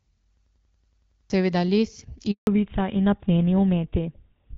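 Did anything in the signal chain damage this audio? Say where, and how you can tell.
Yes. From 0.37 s to 1.3 s the sound turns into a rapid machine-gun stutter: one fragment of about 93 ms repeats ten times at roughly 10.8 Hz. That is a system hang loop at the driver or buffer stage. The host stalled while the audio hardware kept replaying the same ring buffer, and a period that length fits a 4096-sample buffer. About a second of real audio never got through.

At 2.31 s the sound falls away almost at once and stays silent for 160 ms, until 2.47 s. This is a handover gap at the network stage. The call was passed from one network link to another, no speech frames arrived while it switched, and whatever was said in that window is gone rather than delayed.

From 2.47 s to the end the sound is duller and rougher, with nothing left above 4 kHz. This is a fallback to narrowband at the codec stage. 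Right after the handover the call left the AMR wideband (HD Voice) codec at 12.65 kbit/s, which carried the upper band earlier in the clip, and dropped to the older GSM full-rate codec at 13 kbit/s. That codec's band limit removes the top octave of detail.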